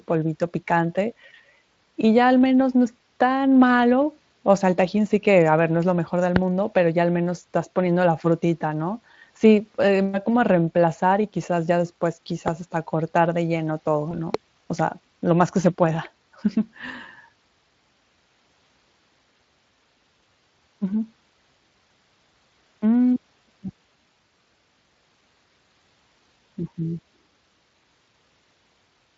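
At 6.36 s, 12.48 s and 14.34 s a loud pop, likely from an electrical pulse such as a switch or static, spikes about 20, 15 and 15 dB above the speech, showing as narrow waveform spikes and full-height spectrogram lines. From 14.11 to 14.15 s, VoIP packet loss concealed by the speech codec, which through the Speex coding fills one lost 20 ms frame, leaves a brief, stretched sound that fades.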